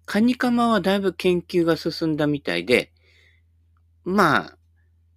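A short speech recording with no technical fault to report. Nothing in it calls for a time stamp or a cause.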